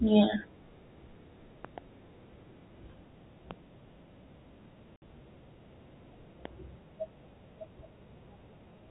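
At 1.65 to 1.80 s, two loud pops land in quick succession, about 15 dB above the speech. A likely cause is a voltage spike from a plug, switch or static discharge. Another single pop follows at 3.51 to 3.53 s, and another at 6.45 to 6.48 s. The speech continues underneath each one.

From 4.96 to 5.02 s, packet loss filled with silence cuts a 60 ms hole. The gap fits three lost 20 ms packets. The narrow telephone band of the G.711 coding is audible throughout.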